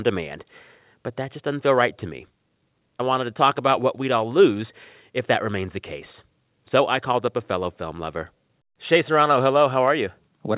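Listening through the speech, nothing stood out as a technical problem at any point.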